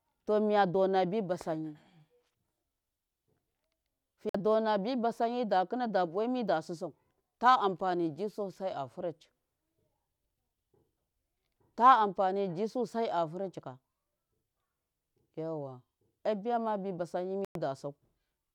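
A speech recording with two brief dropouts to silence, at 4.29 s lasting 52 ms and at 17.45 s lasting 106 ms, after which the audio resumes. This is likely a Bluetooth stall, where delayed packets let the receiver's buffer run empty until retransmissions arrived.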